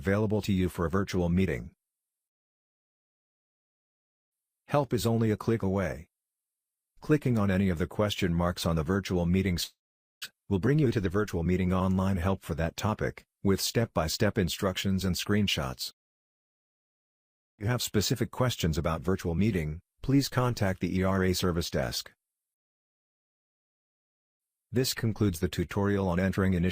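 At 9.63 s a long network dropout likely cut the stream: the receiver drew out the last sound as a fading buzz for about a tenth of a second, then left near-silence until 10.26 s, and about 400 ms of audio never returns. The built-up backlog then forced jitter buffer speed-ups. From 10.33 to 11.52 s short pitch-period slices are trimmed repeatedly, running the sound about 10% fast at unchanged pitch and shedding roughly 150 ms. From 12.28 to 12.93 s it runs about 7% fast, losing some 50 ms. A second likely long network dropout from 17.05 to 17.61 s is almost entirely silence, with about 400 ms gone. From 17.68 to 19.27 s another speed-up, about 7% faster at the same pitch, removes roughly 100 ms, and the audio sounds hurried.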